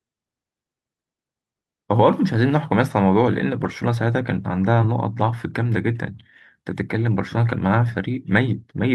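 Speech, with three lost packets rebuilt from error correction between 3.59 and 3.69 s. There is no gap, but about 60 ms of the voice turns rougher and noisier, consistent with three lost 20 ms packets replaced by the low-bitrate redundant copies that Opus carries in the following packets.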